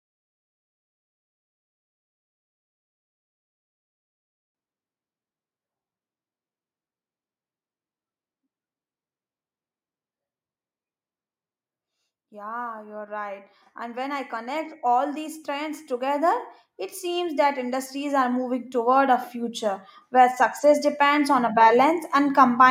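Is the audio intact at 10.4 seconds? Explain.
Yes, at 10.4 seconds the speech plays through intact, with no dropout, click, distortion or other fault heard at that moment.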